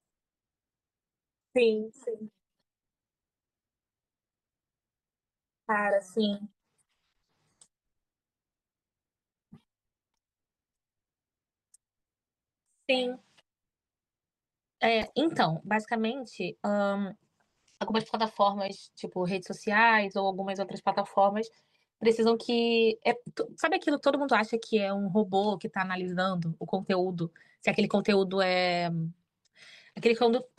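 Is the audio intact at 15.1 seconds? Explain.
No. From 15.01 to 15.13 s a corrupt frame decoded fault runs across several frames: flipped bits misread as gains and codes produce a short burst of energy at wrong frequencies, heard as a chirp, squeak, blip or noise burst, not a smeared repeat.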